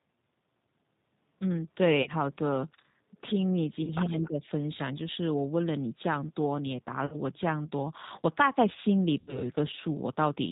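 G.729 coding, throughout this speech recording, band-limits everything to 4 kHz and rebuilds the voice from a filter, pitch predictor and sparse pulses, giving a plainly rough, synthetic edge at 8 kbit/s. VoIP packet loss concealed by the speech codec is heard at 2.02–2.10 s, 3.84–3.92 s, 7.06–7.17 s and 9.19–9.44 s, where the decoder stretched the last pitch and filter into a fading buzzy tone or coloured noise. The gaps of about 40, 30, 60 and 80 ms fit runs of lost 10 ms frames.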